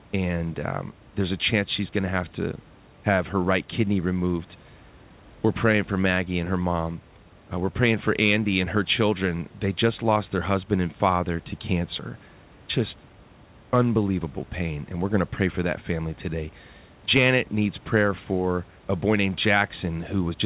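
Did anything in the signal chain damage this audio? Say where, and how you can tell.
No, nothing in the signal chain damaged this audio.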